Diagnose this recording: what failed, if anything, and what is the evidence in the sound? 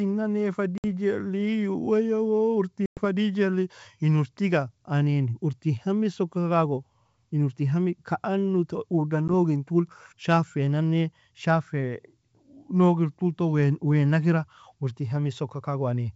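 Packet loss on an ADPCM call, a network fault: hard-edged silent holes at 0.78–0.85 s after "nane fa", 2.86–3.01 s and 9.28–9.30 s, losing about 60, 110 and 10 ms. The decoder's predictor and step size drift from the sender's, so speech resumes slightly distorted.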